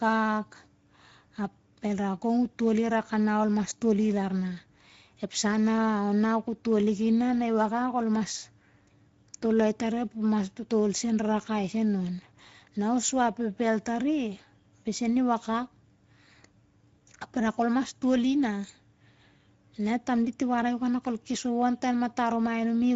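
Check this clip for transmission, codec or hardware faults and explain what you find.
One codec fault runs through the whole clip: Speex codec damage that is plainly audible. Speex is a CELP coder that rebuilds speech from a predicted spectral envelope plus a limited excitation signal. The sound points to a middle quality setting, which fits about 16.8 kbps. With so few bits for the excitation, the speech comes out noisy and hoarse. On a spectrogram, energy stops sharply at 7.6 kHz, and the band above 4 kHz shows smeared, noise-like texture instead of clean harmonics.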